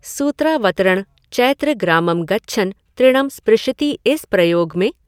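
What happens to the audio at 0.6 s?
Nothing goes wrong at 0.6 s: the speech runs through that moment intact, with no dropout, click, distortion or other fault to be heard.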